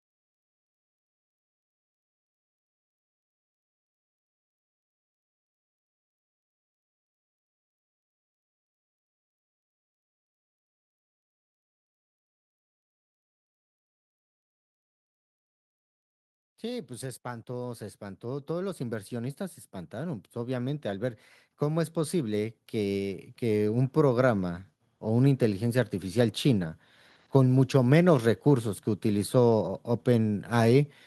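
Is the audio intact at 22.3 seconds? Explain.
No, at 22.3 s you're in the middle of automatic gain rising, from 16.61 to 26.76 s: the gain control ramps up about 17 dB, swelling voice and background together.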